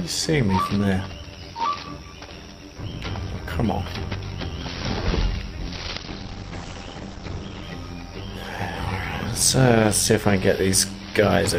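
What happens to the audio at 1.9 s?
Overlap-add ripple is present at 1.9 s, as it is across the whole clip. The audio was split into windowed frames and rebuilt with an overlap whose windows do not add up to a steady gain, so the level dips and recovers once per frame, by about 6 dB, at a rate of around 100 times a second. At that moment the sound carries a fast, buzzy flutter, a rough robotic tremolo riding on everything.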